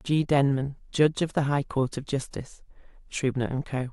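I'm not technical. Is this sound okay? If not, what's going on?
Yes, this one's fine: nothing in the recording stands out as a technical problem, so there's nothing here you need to worry about.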